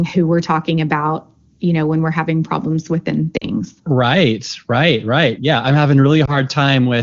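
A brief warble and dip in level at 3.37 to 3.50 s, then a shorter one at 6.25 to 6.37 s, are lost AMR speech frames. About 40 ms of audio is missing in the first and 20 ms in the second, which fits two dropped frames and then one. The AMR-WB decoder patches each gap by repeating the last good pitch and vocal tract settings at falling gain, and the speech comes back briefly weak.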